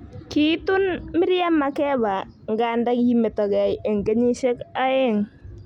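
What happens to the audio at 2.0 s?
Nothing goes wrong at 2.0 s: the speech runs through that moment without any dropout, click, distortion or other audible fault.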